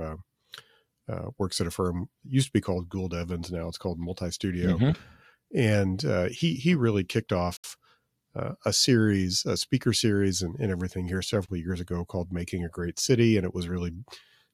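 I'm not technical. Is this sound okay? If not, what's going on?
No. The speech cuts out twice, from 7.57 to 7.64 s and from 11.46 to 11.49 s, then carries on. This is likely a Bluetooth stall. Wireless interference delayed the audio, so the headphones briefly ran out of sound to play.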